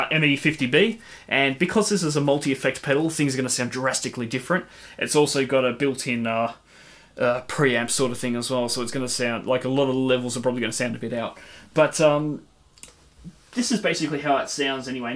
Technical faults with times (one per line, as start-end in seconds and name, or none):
none